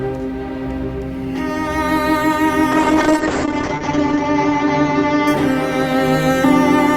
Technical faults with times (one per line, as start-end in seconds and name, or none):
2.73-5.59 call bitrate drop